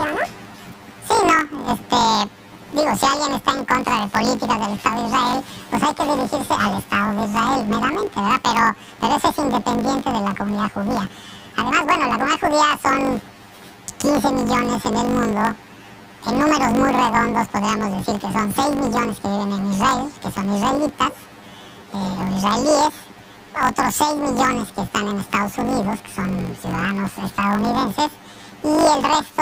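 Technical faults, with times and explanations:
Throughout, planar audio read as interleaved: a robotic buzz at 50 Hz runs through everything. Each 20 ms block of left-then-right samples is read as alternating pairs, so every block plays twice at double speed, an octave up, too briefly to hear as pitch.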